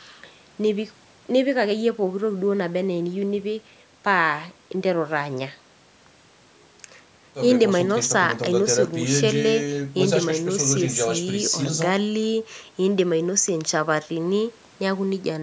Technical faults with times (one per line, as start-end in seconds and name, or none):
none